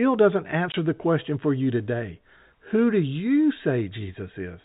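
Speech over a G.711 telephone path, limited to 4 kHz, with one dropout from packet loss filled with silence at 0.72 to 0.74 s. The 20 ms hole, which fits a single lost packet, was replaced by silence and has hard edges.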